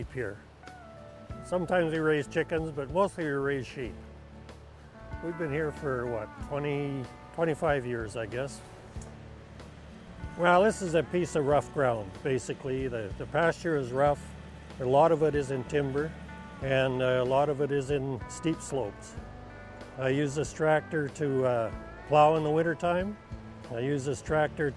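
No technical fault can be heard anywhere in the audio, and the signal stays continuous and stable throughout.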